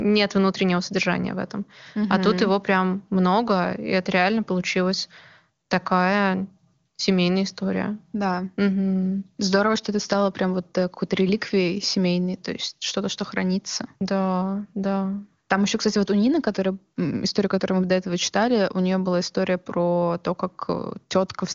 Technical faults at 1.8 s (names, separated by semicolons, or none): none